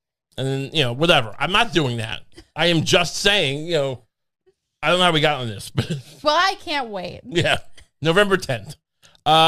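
No audible technical faults here.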